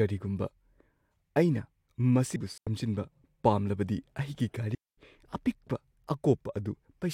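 At 2.35 s the speech is broken by damaged data in the compressed stream. For about 12 ms the decoder reads corrupted frame contents, loses its place in the bitstream and has to find the next valid frame header before decoding properly again. The result is a short, unnatural blip or chirp. On a spectrogram it shows as a thin vertical smear of energy that doesn't follow the surrounding harmonics. In the waveform it is a narrow, jagged spike.

Shortly after, from 2.58 to 2.67 s, comes the first digital wireless dropout. The receiver lost too much of the link's data and muted for about 92 ms, fading down and back up very quickly. A second dropout runs from 4.75 to 4.98 s and mutes for about 230 ms. Both are clean holes of near silence with no noise burst on either side. In the waveform each appears as a flat, empty gap with short tapered edges. On a spectrogram each is a blank vertical band across all frequencies.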